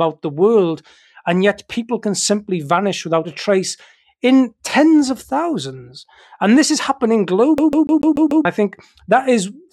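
From 7.58 to 8.45 s, the speech falls into a CD stuck on one turn. A scratch keeps sending the laser back one track. The same 0.14 s slice plays six times, with a brief mute at each jump. It sounds like a fast, even stutter.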